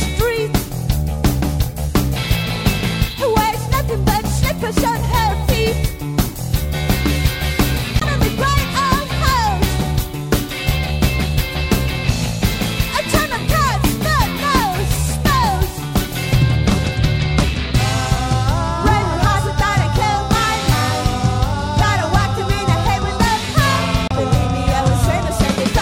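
Damaged data in a compressed stream hits twice, at 7.98–8.03 s and 24.07–24.12 s. Each time corrupted frames break the decoder's sync, producing a brief chirp, squawk, click or short hole.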